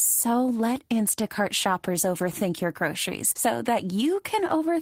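No technical faults can be heard anywhere in the speech signal.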